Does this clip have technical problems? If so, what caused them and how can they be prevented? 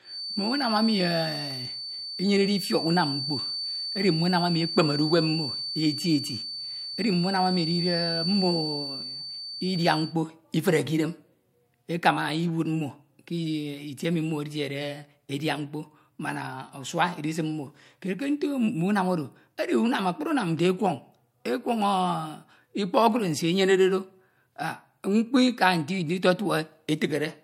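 Yes. A feedback whistle runs under the speech from the start to 10.17 s. It is a thin, steady tone at 4.5 kHz, around 10 dB quieter than the speech, swelling and fading slowly in level. The likely cause is a loudspeaker feeding back into the microphone, with the loop gain held right at the edge of feedback. One frequency keeps ringing without building up. Lower the monitor level, or move the microphone away from the loudspeaker.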